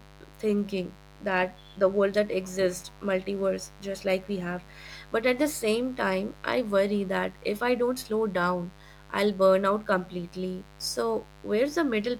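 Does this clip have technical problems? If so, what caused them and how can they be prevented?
Yes: a mains buzz runs through the whole speech clip, sitting roughly 25 dB below the voice. Switching spikes at twice the 50 Hz cycle leak in, stacking harmonics into the kilohertz range; a spectrogram shows evenly spaced horizontal lines, the waveform a fine periodic spiky ripple. Proper shielding, balanced cabling and keeping dimmers off the recording circuit would prevent it.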